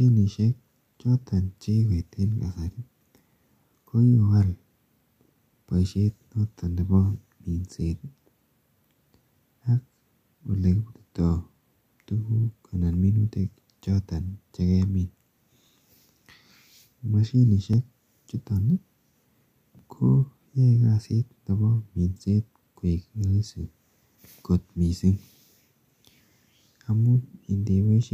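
Two devices in the chain are likely running on separate clocks that disagree by roughly 500 parts per million, so the buffer between them drifts until it must drop or repeat a block of around 50 samples. These are clock drift buffer slips: from 1.26 s to 28.03 s the speech carries a regular click or pop every 2.06 s, about fifteen in all, heard wherever sound is present.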